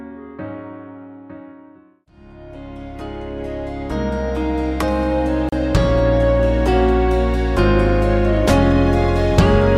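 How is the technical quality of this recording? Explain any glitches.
The recording has one glitch: a gap at a join of encoded pieces at 5.49 s. The sound drops out in a gap of about 34 ms and then resumes exactly where it stopped, with its edges smeared by the codec. The audio was likely encoded in separate sections and joined without trimming, so the encoder's start-up delay and last-frame padding remained as a short hole in otherwise continuous sound.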